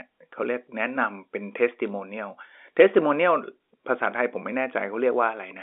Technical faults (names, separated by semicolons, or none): bit errors on a digital phone line